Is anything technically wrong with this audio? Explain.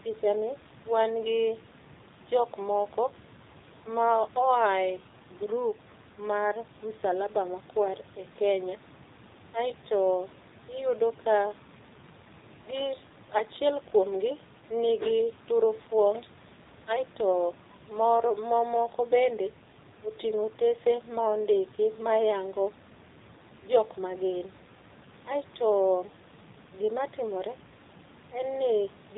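Yes. AMR narrowband mobile codec damage runs through the whole clip. The speech has been squeezed through a vocal-tract model that rebuilds each 5 ms from a handful of pulses, so everything above 4 kHz is gone, pointing to 8 kHz sampling. The buzzy, synthetic edge on the voice fits one of the lower AMR-NB modes, around 7.4 kbps. The background room noise, about 23 dB below the speech, turns into a swirling warble.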